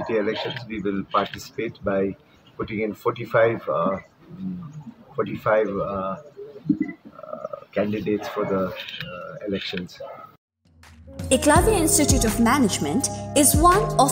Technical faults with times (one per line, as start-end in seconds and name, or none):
11.33-11.36 loud pop